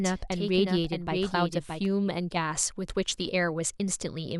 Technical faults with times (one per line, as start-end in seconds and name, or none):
0.00-1.86 doubled audio track